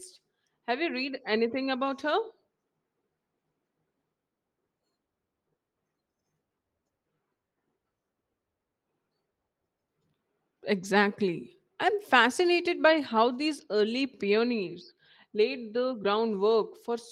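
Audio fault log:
No faults heard anywhere in this speech clip.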